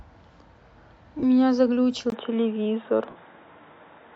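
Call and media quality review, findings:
Lost LE Audio frames, 1.19–1.23 s and 3.09–3.16 s: 37.5 ms and 60 ms gaps (fits five and eight 7.5 ms frames), LC3 concealment repeating the last spectrum with random signs, fading to noisy smear.

Input switched to a poorer device, 2.10 s to end: 20 ms silence, then dull band-limited sound, nothing above 3.8 kHz, level shifts about 5 dB, new noise floor well below the speech. Likely a move to a headset call profile.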